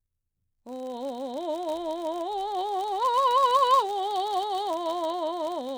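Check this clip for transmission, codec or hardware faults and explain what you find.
One fault runs through this music clip: filter restarted on every block. Throughout, the filter resets each block and starts from silence, adding a small transient every 10 ms. This produces a 100 Hz buzz that tracks the music's level. It shows as evenly spaced ticks on the waveform and a 100 Hz harmonic comb on the spectrogram.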